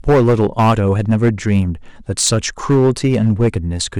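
Hard clipping runs through the whole clip: the speech is driven about 10 dB past what a stage in the chain can pass, so a small share of samples, around 7 percent, get cut flat. Those squared-off peaks add harsh upper harmonics, heard as a gritty fuzz on every louder syllable.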